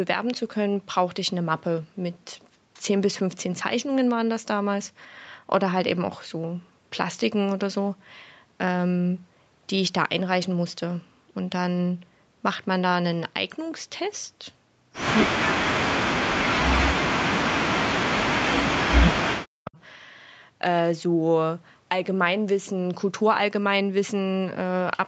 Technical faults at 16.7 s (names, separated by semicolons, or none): speech suppressed in double talk